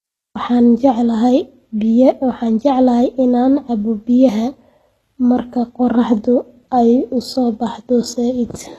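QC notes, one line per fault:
Throughout: likely HE-AAC compression. The treble is rebuilt from copied lower bands rather than coded, so s sounds turn gritty and lispy, which fits a very low bitrate near 16 kbps. A spectrogram shows blocky, repeated high-band texture and nothing above 12.4 kHz.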